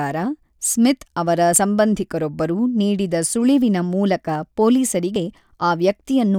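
It's a speech recording with two quick skips, at 1.56 s and 5.16 s. Each time the speech jumps forward, losing around 40 ms with no gap of silence. The likely cause is a dropped buffer (overrun): the recording software didn't read its samples before the hardware wrote over them, so a block vanished and the audio on either side got butted straight together.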